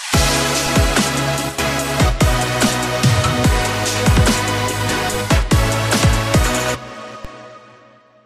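A DC step occurs at 7.25 s: the waveform's zero line jumps abruptly to a new offset, which then drains away as a roughly 20 Hz high-pass would let it. The sudden shift registers as a brief low thump, while the sound itself continues unaltered.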